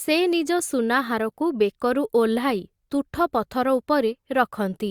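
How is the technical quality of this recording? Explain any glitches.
No technical glitches can be heard in this speech recording. Nothing in the audio calls for an explanation.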